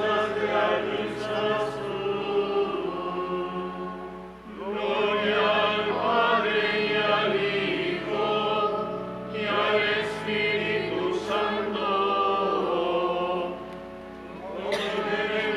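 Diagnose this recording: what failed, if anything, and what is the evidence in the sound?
A single sharp click at 10.28 s is dropped samples, most likely a driver or buffer glitch that skipped a couple of samples. The waveform jumps abruptly to a later value, leaving a step discontinuity, and the spectrogram shows one thin vertical line spanning all frequencies.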